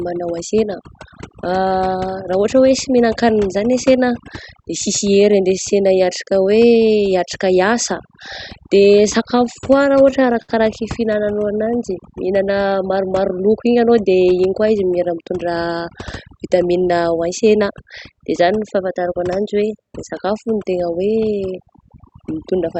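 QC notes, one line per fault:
throughout, overdone noise removal: an over-aggressive noise reducer gates individual frequency bands near its noise estimate, leaving a lowered, twinkling background and taking quiet parts of the speech with it.
9.23–10.52 s, repeated stalls (stutter): the jitter buffer ran dry 11 times as packets arrived late, and the receiver stretched the last sound to fill about 170 ms in total (longest gap 66 ms), so the speech drags and stutters without losing anything.
14.17–14.67 s, jitter buffer speed-up: the buffer had built up excess delay, so the receiver cut out about 70 ms in pitch-period pieces, making the speech run at 113% speed with its pitch unchanged and sound hurried.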